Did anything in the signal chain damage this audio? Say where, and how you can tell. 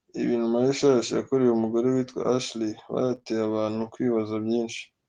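Yes, the damage is in the network stage. From 3.03 to 3.13 s the sound turns rougher and noisier, with no gap. That is a lost packet rebuilt from error correction: the decoder played a low-bitrate copy carried in later packets. The 60 ms rebuilt fits three 20 ms packets.

Right after, three short concealed packet losses follow back to back, at 3.15 to 3.19 s, 3.19 to 3.23 s and 3.23 to 3.27 s. Each hole was 20 ms. The decoder extended the preceding sound to cover them, so this stretch smears and wobbles before settling.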